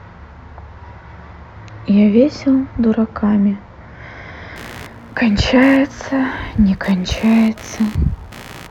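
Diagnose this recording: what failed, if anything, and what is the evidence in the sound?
Computer activity noise in the analogue wiring from 4.56 s onward: buzzing at about 70 pulses a second, roughly 25 dB below the speech, as computer load disturbs the shared ground.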